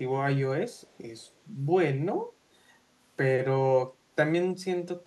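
A faint, delayed copy of the speech trails behind the talker in two short scraps, from 0.75 to 0.98 s and again from 1.2 to 1.31 s. It sits about 40 dB below the speech and lags it by 156 ms. This is echo leak. It is likely that a loudspeaker on the far end fed the voice back into that side's microphone and its echo canceller let these residual fragments slip through and return.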